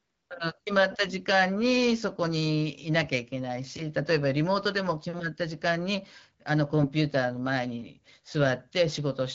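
At 6.80 to 6.86 s the speech briefly turns hoarse and gargly, a scratchy roughness over about 60 ms while pitch and level hold roughly steady. These are AMR bit errors: on a weak link the less protected bits of a few frames arrived corrupted, at an error rate of around 3 percent, yet passed the check on the critical bits. Excitation pulses land misplaced and fine gain and spectral values drift, so the decoder renders distorted frames instead of muting them. The surrounding AMR-WB coding at 12.65 kbit/s sounds clear, with only light codec colouring.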